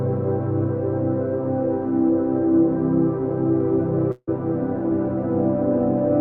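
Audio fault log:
4.11–4.29 s, long network dropout. The music breaks off. Its last sound carries on as a fading buzz or hiss for about 0.16 s. Then about 30 ms of near-silence follows. The music returns further on, with about 0.16 s of it gone. The likely cause is a stretch of audio that never arrived. The receiver stretched its last sound to cover the gap, then gave up. Playback then jumped past the lost part.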